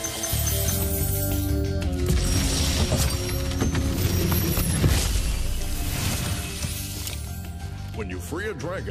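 From 1.87 to 5.46 s there is a wrong sample rate fault. The samples are played slower than they were captured, with no conversion, which fits 48 kHz material running at 44.1 kHz. The sound slows to 0.919 times speed and drops 1.47 semitones, so it seems sluggish and lower.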